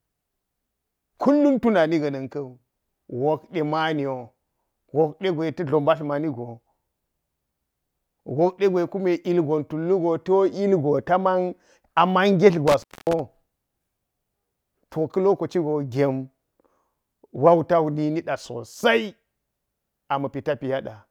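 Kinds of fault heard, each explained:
Intermittent contact: a loose connection briefly opens between 12.68 and 13.20 s, cutting the speech for about 0.25 s, with crackle at the break edges distinguishing it from a clean digital dropout.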